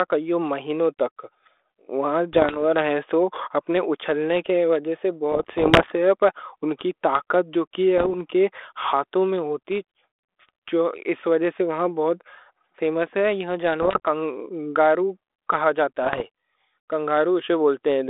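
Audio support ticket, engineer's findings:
Bit errors on an ADPCM link at 2.33–2.57 s, 5.32–5.93 s, 7.98–8.10 s (after "ان کی طاقت"), 13.82–14.00 s (before "کنگارو کہا") and 16.03–16.24 s (after "کنگارو کہا"). Pops and rough bursts with brief level jumps. Roughly 0.7–1% of bits flipped, upsetting the decoder's step size and predictor so each hit rings on briefly. Narrowband telephone-style coding underneath, consistent with 32 kbit/s G.726.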